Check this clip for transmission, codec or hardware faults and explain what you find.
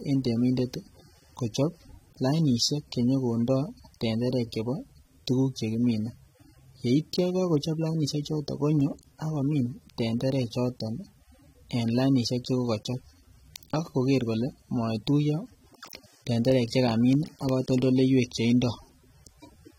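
One codec fault runs through the whole recording: AAC compression. The speech sounds dull and smeared, with a fizzy, warbling texture on sibilants and sustained vowels, and nothing above 16.6 kHz. This likely comes from AAC-LC at a low bitrate, where too few bits leave spectral holes. A plain low-pass filter would dull the top without that shifting, watery grain.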